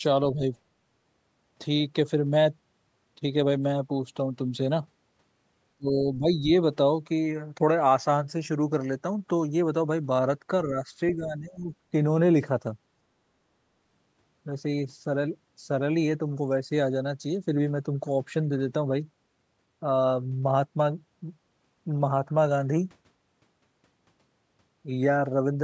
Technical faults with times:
0.33-0.43 speech suppressed in double talk
5.77-6.52 speech suppressed in double talk
10.64-11.72 speech suppressed in double talk

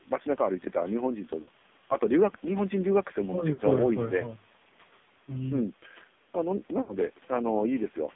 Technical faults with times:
0.00-8.15 AMR narrowband mobile codec
1.42-1.49 lost AMR speech frames
3.54-3.61 lost AMR speech frames
6.82-6.97 lost AMR speech frames

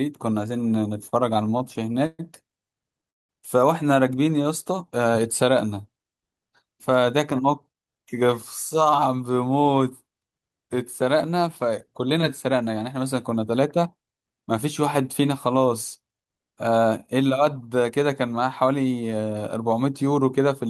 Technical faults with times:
1.09-2.21 repeated stalls (stutter)
3.10-3.31 call audio freeze
4.15-4.48 jitter buffer slow-down
6.51-8.29 jitter buffer speed-up
8.74-9.09 jitter buffer speed-up
13.56-14.14 jitter buffer speed-up

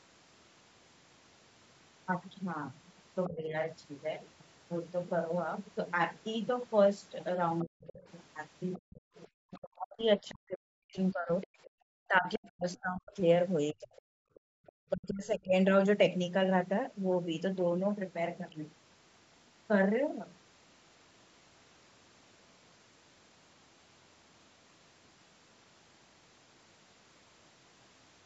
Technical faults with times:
2.13 dropped samples
3.28-3.55 speech suppressed in double talk
7.59-9.27 other side's voice leaking through
7.63-13.94 speech suppressed in double talk
11.41-12.77 other side's voice leaking through
11.70-11.80 background gated by the echo canceller
13.97-14.72 other side's voice leaking through
14.22-14.62 background gated by the echo canceller
14.90-15.55 speech suppressed in double talk

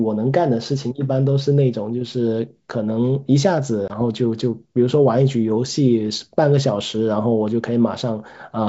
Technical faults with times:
3.88-3.91 packet loss on an ADPCM call

